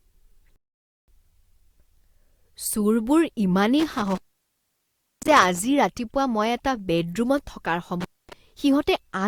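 Rebuffering stall, 0.56 to 1.08 s: the player exhausted its downloaded audio and paused until more arrived, so the speech drops to silence and then picks up exactly where it stopped. Nothing is lost, but about 0.52 s is added.

Intermittent contact, 3.80 to 5.60 s and 8.01 to 8.33 s: a loose cable or plug briefly opens, cutting the sound with crackle at each edge and leaving faint hiss. The line stays open for 1.04 s in the first dropout and 0.24 s in the second.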